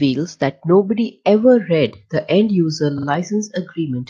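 At 2.97 s the speech stutters. A short stretch of about 46 ms is played again twice, through to 3.07 s. This is a repeated frames fault. A block of compressed audio was written or sent more than once, and the decoder simply played it again each time. The repeat length fits a block of about two compressed frames. The clip grows by about 93 ms as a result. The passage sounds like a brief mechanical judder.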